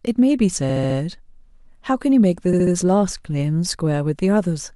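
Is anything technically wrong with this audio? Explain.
Yes. Two stretches of repeated frames occur in this speech. From 0.69 to 0.96 s, a block of about 70 ms plays four extra times. From 2.52 to 2.73 s, a block of about 60 ms plays three extra times. Each block points to a short run of compressed frames being written more than once, so the decoder replays it. The result is a stutter. Together they add about 0.49 s.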